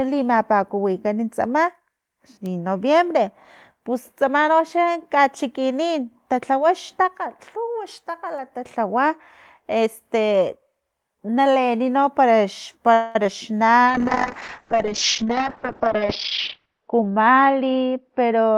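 Call audio freeze from 12.93 to 13.16 s: the speech stalls for about 0.22 s while the last sound is stretched into a fading buzz or hiss, then carries on where it stopped. Nothing is lost, but the pause adds about 215 ms of delay, likely because packets were held up and the jitter buffer ran dry.

Short concealed packet loss at 13.24 s: about 10 ms of audio never reached the decoder in time. The receiver patched the gap by extending the preceding sound and blending back, which leaves a tiny smear or wobble just after the freeze.

Call bitrate drop from 13.87 s to the end: the encoder's budget falls from 40 to 9 kbps and stays at its lowest for about 2.9 s. Coarser coding makes the speech rough and watery, and the bandwidth shrinks from 20 kHz to 6 kHz, so it turns muffled.

Jitter buffer speed-up from 15.22 to 16.05 s and again from 16.58 to 17.42 s: with too much audio queued, the receiver trimmed short pitch-period slices to reduce the delay. 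The speech runs at 114% and then 111% speed at unchanged pitch, sounding hurried. Roughly 0.15 s and 0.1 s are removed.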